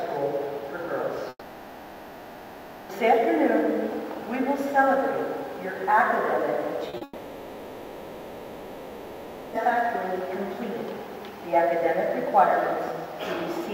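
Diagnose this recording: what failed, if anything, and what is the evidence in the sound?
Two long gaps sit in the network path. From 1.29 to 2.91 s the last sound is drawn out as a fading buzz, then about 40 ms of near silence before the audio resumes. From 7.03 to 9.58 s the same stretched, decaying fill runs for about 2.5 s with no silent gap. The audio picks up later in each case, with the missing part simply gone. This is likely a long network dropout, with the receiver's concealment covering the hole until it gives up.

Short concealed packet loss appears just before the second gap. Two brief smears occur at 6.89 to 6.95 s and at 6.97 to 7.03 s. Each lasts about 60 ms, with roughly 40 ms of it synthesised. The receiver did not get those packets in time. It extended the preceding sound and blended it back into the real signal. The result is a quick wobble rather than a clean cut. The second smear runs straight into the long dropout.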